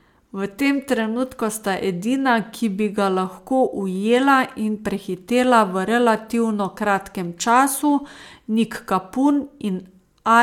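No technical faults are audible anywhere in the speech.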